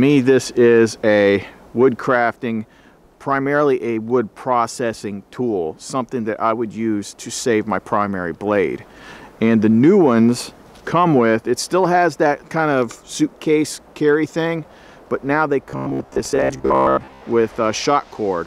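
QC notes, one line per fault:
15.70–17.23 s: robotic sound from repeated short buffers. A rigid metallic buzz at 66.7 Hz, likely from a 15 ms buffer replayed in place of most of the incoming audio.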